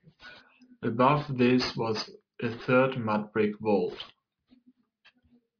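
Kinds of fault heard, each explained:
Aliasing: Sibilants sound gritty and metallic throughout, with energy packed hard against a 5.5 kHz ceiling. This points to resampling to about 11 kHz with no anti-alias filter, so higher content folds back to wrong frequencies roughly 20 dB below the speech.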